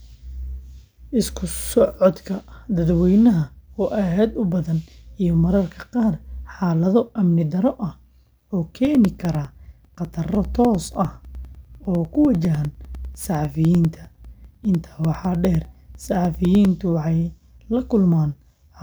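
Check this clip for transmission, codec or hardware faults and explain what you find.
One hardware fault is audible: periodic USB or driver dropouts between 8.85 and 16.65 s. Every 0.1 s a brief gap of a couple of milliseconds drops out and is filled with silence, roughly seventy in all. Something is stalling the USB bus or audio driver on a fixed cycle. The result is a steady ten-per-second ticking that sounds only where the speech has energy. The strict regular spacing separates it from random network packet loss.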